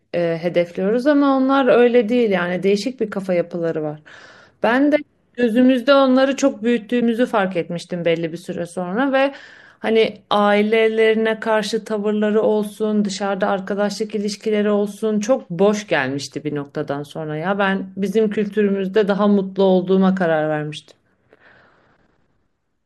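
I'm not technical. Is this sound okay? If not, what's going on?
No. A broken MP3 bit reservoir shows up at 7.00 s and 18.35 s: the speech jumps ahead with a brief garbled blip, likely because missing file chunks scrambled the following audio.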